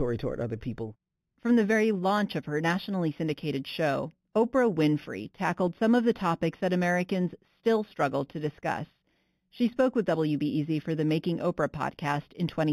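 Across the whole speech clip there is imaging from linear upsampling, which fits a rate raised from 8 kHz to 44.1 kHz by straight-line interpolation. The top is dulled, and a faint mirrored copy sits at 4 to 8 kHz, roughly 30 dB down, giving sibilants a metallic shimmer that plain band-limiting would not produce.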